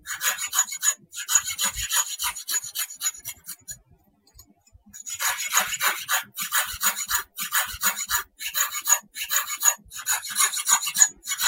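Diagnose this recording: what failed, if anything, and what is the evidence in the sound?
Nothing in this recording points to a failure. No stage in the chain, from capture through to playback, leaves any audible trace of a fault.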